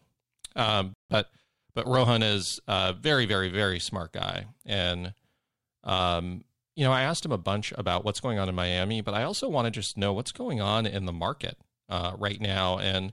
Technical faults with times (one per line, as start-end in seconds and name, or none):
0.94-1.10 playback stall
1.10-1.72 time-compressed catch-up